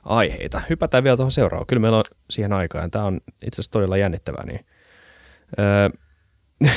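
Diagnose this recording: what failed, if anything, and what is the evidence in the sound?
Nothing failed: no stage of the chain, from capture to playback, leaves an audible defect anywhere in the speech.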